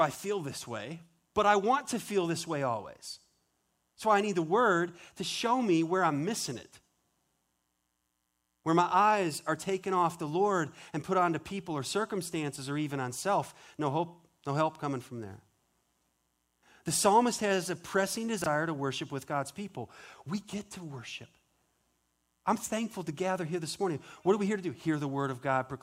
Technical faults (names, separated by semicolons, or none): chunks out of order